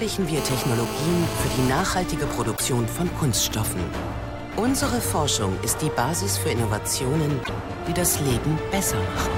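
GSM phone buzz runs from 0.37 to 1.70 s. A 2G handset in an active call transmits radio bursts about 217 times a second, and the audio circuitry rectifies them into a hard, raspy 217 Hz buzz full of harmonics, sitting about 7 dB below the signal.

GSM signalling bursts follow from 1.71 to 4.53 s. The same phone, still in the call but with its user silent, sends only short groups of bursts. They come through as even ticks with a longer 217 Hz buzz twice a second, roughly 20 dB under the signal.

A broken MP3 bit reservoir is the likely cause of two short glitches, at 2.56 to 2.61 s and again at 7.43 to 7.49 s. In each, the audio jumps ahead with a brief chirp or hole. This fits missing frames of 24 ms, after which the next frame read borrowed bytes belonging to another frame.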